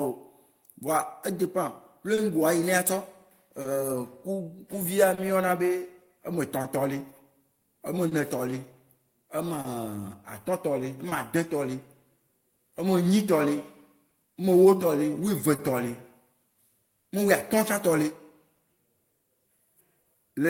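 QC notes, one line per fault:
Throughout, clock drift between sender and receiver: the sending side's clock runs slow by around two percent, so the receive buffer keeps draining and the receiver has to stretch things out by repeating tiny slivers of audio to keep playback going. You hear that as small timing hiccups, little stutters and slight drags in the speech, popping up all the way through at uneven intervals rather than on any steady beat.
2.15 to 20.09 s, scattered short gaps: about fifteen packets went missing or arrived late, spread singly across this stretch, the longest only around 30 ms, adding up to roughly 400 ms, about 2 percent of the span. Each hole got papered over by carrying the last bit of sound forward, so nothing drops out completely, but you catch brief ticks, smeared bits and quick hiccups here and there.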